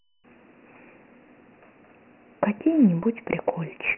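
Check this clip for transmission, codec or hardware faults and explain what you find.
There's one codec fault, running the whole way through. Dialogic VOX ADPCM: only 4 bits per sample track how the speech changes, and the coarse steps leave a gritty hiss riding on it. Nothing survives above 2.9 kHz, and the heavy damage fits roughly 24 kbps.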